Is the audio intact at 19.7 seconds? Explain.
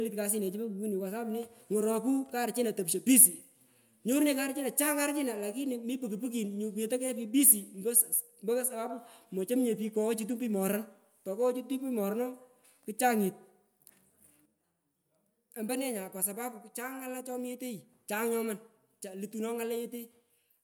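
Yes, the speech at 19.7 seconds plays through intact, with no audible dropout, click, distortion or other fault at that moment.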